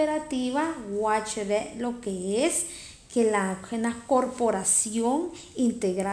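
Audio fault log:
Nothing to flag here, since the speech comes through without any audible trouble at any point.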